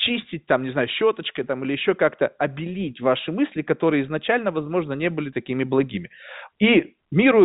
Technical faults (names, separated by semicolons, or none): none